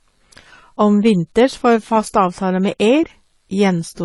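Across the whole speech clip the top end stops dead at about 11.4 kHz, and the sound carries a mix of artefacts from different codecs heard together. The two textures don't come from a single encoder. The likely cause is transcoding between lossy codecs. A low-rate AAC-style pass, perhaps around 32 kbit/s, was later re-encoded to MP3 near 96 kbit/s, which kept the earlier damage and layered its own artefacts on top.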